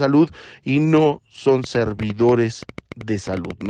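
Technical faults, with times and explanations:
0.77 to 0.79 s, lost packet rebuilt from error correction: Just before "no son" a brief stretch turns rougher and noisier, with no gap or dropout. One packet went missing, and the following packet carried a low-bitrate backup copy that the decoder played instead. The 20 ms of audio rebuilt from that coarse copy sounds grainier than its surroundings, which fits a single 20 ms packet.
1.64 to 3.67 s, train of clicks: After "y no son" a run of ticking pops sits on top of the sound through to nearly the end of the clip, audible in pauses as well. There are around twenty clicks, about 8.4 per second, at an uneven pace. They are similar in shape and peak about 5 dB above the signal. Such a pulse train likely comes from electrical interference or a faulty connection or power supply injecting repeated spikes.
1.89 to 2.23 s, lost packet rebuilt from error correction: Shortly after "y no son" the sound becomes coarse and noisy for 180 ms while the clicks continue, yet it never drops out. 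Several separate packets were lost, which fits about nine 20 ms packets. Each was replaced by the low-bitrate copy carried in the packet after it, so those rebuilt stretches play back at reduced quality.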